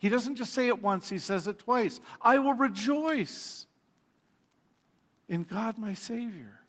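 Listening through this speech clip, nothing stood out as a technical problem, with the sound limited to about 8 kHz as expected after passing through a call's microphone processing and codec.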